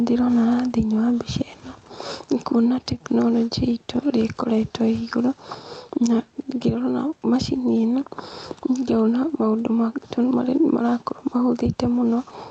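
Throughout the speech, the level pumps with a gain swing of around 5 dB that flattens the dynamics. This is gain pumping, likely from input gain set too high with a fast limiter clamping each peak. The room noise sits about 43 dB below the speech.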